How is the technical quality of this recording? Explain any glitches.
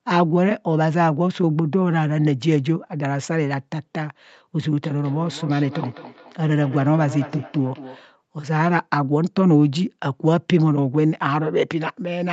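The recording has one clear glitch, in the middle of the clip. The audio sits inside a call-codec bandwidth with nothing above 8 kHz.

From 4.84 to 8.1 s there is feedback echo between two devices. Each phrase comes back at a fixed spacing of about a fifth of a second, sounding thinner and more ringing with each pass, at up to about 17 dB below the speech. Two devices in the same room are on one call. One plays out what the other's microphone sent, and that microphone picks it up again. Each device's echo canceller only removes its own playback, so the loop goes unchecked.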